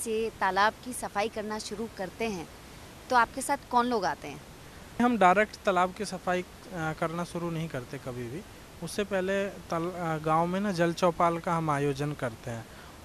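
No technical faults are audible in this speech recording; the only background is the room's own noise, sitting about 20 dB below the speech, which belongs to the recording space rather than the signal chain.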